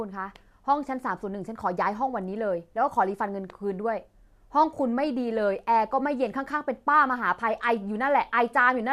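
Listening to this speech recording, nothing stood out as a technical problem.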